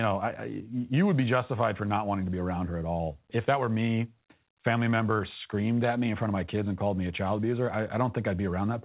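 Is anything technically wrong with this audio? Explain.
No, nothing technically wrong can be heard here.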